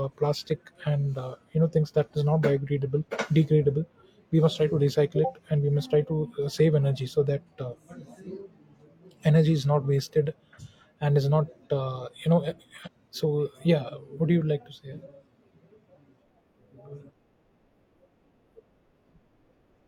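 At 12.82 to 12.88 s, right after "not uh you know", the speech jumps abruptly forward with a brief blip, as if a piece of the speech vanished. This is a stream segment skipped: one chunk likely failed to load, and playback resumed with the next.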